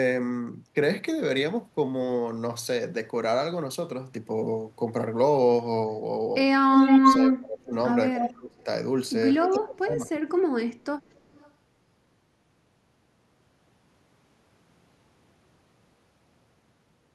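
Speech from a call, carrying an echo leak and speech suppressed in double talk. A delayed copy of the voice returns at 6.74–7.33 s, 8.19–8.29 s and 11.05–11.51 s, always trailing by 268 ms. The first is actually a little louder than the direct speech, the second somewhat quieter, and the last barely audible. That fixed, discrete lag sets it apart from room reverberation, which smears into a diffuse tail rather than repeating as a distinct copy. The likely cause is a far-end loudspeaker whose echo canceller let part of its microphone pickup back into the line. The voice also sinks sharply, by roughly 25 dB at its deepest, at 7.0–7.73 s, 8.13–8.67 s and 9.4–10.29 s, the first two overlapping the echo bursts when both sides are active. Unlike a network dropout, which leaves clean gaps of silence, these are partial dips that track the other talker. This most likely comes from an echo canceller clamping down on both voices during double talk.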